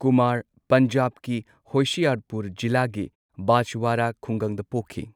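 Nothing goes wrong here: the speech comes through as it should, and the background settles to silence in the gaps and returns right on time for the next phrase.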